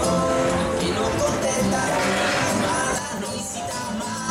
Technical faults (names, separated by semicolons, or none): one channel drops out